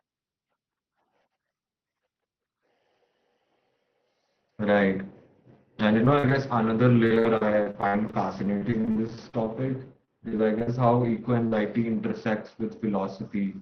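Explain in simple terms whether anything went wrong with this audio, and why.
Repeated packet loss (robotic sound) from 6.05 to 9.47 s and 9.93 to 11.52 s: missing chunks were patched by stretching earlier sound, leaving choppy, robotic gaps.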